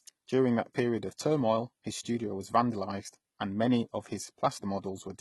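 The speech has likely been passed through HE-AAC compression at a very low rate, consistent with something near 16 kbps. The codec spends its few bits on the lower spectrum and fakes the treble by copying lower bands upward under a coarse envelope. Throughout the clip, that reconstructed top end sounds wrong: s sounds come out gritty and lispy with a metallic sheen, and nothing survives above about 11.8 kHz.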